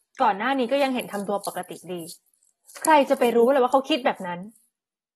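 AAC compression damage runs through the whole of this speech clip: the sound is dull and smeared, with a fizzy, warbling edge on sibilants and nothing above 12.4 kHz. The likely cause is low-bitrate AAC-LC coding, around 36 kbps, quantising coarsely and lowering the cut-off.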